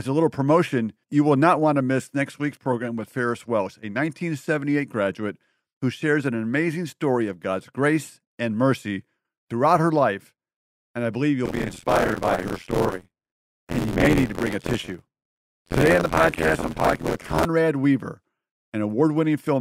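From 11.45 to 17.45 s, buffer tearing gives the speech a robotic 86.1 Hz rattle. Writer and reader cross inside each period, so most of each one replays audio about 50 ms old, from one lap earlier around a ring of 512-sample buffers. A spectrogram shows regular vertical striations, and the waveform shows hard steps at each join.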